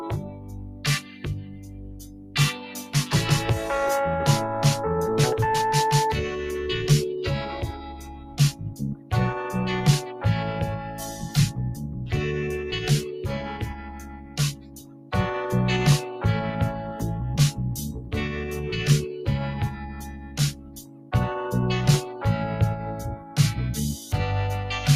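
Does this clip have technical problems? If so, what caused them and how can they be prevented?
Yes. A noise suppressor built for speech was applied to music or sounds for the whole clip. It treats steady tones, ambience and reverb as noise and pulls them down. Sudden attacks pass while sustained parts and tails sink. The level swings by around 15 dB, so the sound pumps and thins. Prevention: disable speech noise suppression, or switch to a music mode, when capturing anything other than speech.

The sound is also cut by the noise suppressor at 0.2 to 2.94 s, 7.72 to 9.12 s, 10.85 to 11.97 s, 13.46 to 15.12 s, 17.95 to 18.13 s, 19.7 to 21.12 s, 23.15 to 23.37 s and 23.96 to 24.13 s. In these spans, held or fading material is judged to be noise. It drops by about 6 to 12 dB, and decays end early. Prevention: turn the suppressor off for non-speech sources.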